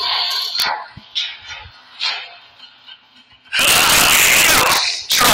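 A sharp crack at 0.60 to 0.62 s, then from 3.59 s to the end, every peak that crosses the limit snaps to the opposite extreme. This is integer overflow: a gain or sum went past the largest representable integer and wrapped around to the other sign instead of being limited, flipping each peak across the whole range. The overload is about 2 dB in the first burst and about 6 dB in the later stretch, and the result is harsher than ordinary clipping.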